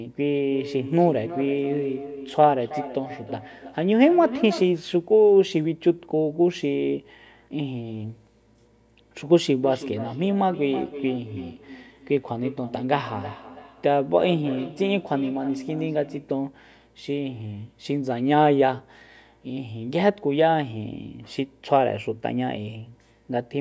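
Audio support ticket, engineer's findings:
Feedback echo between two devices, 0.41–4.83 s: second device in room replaying far end into this mic, own canceller blind to it. Speech returns roughly every 300 ms, thin and ringing, peaking about 12 dB below speech.

Same feedback echo, 9.58–16.41 s: same acoustic loop, repeats again near 300 ms, about 14 dB under speech. Call mic processing band-limits to 8 kHz.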